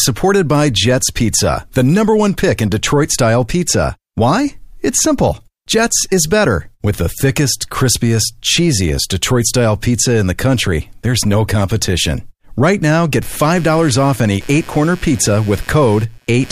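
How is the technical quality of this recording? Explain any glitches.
There's one glitch worth flagging. From 13.22 s, just after "now get", to the end at 16.51 s, computer activity noise creeps in: a buzzy, chirping pulse somewhere around 150 Hz, roughly 25 dB below the speech. Processor or graphics load is shifting the shared ground, so the noise follows the machine's activity rather than the talking.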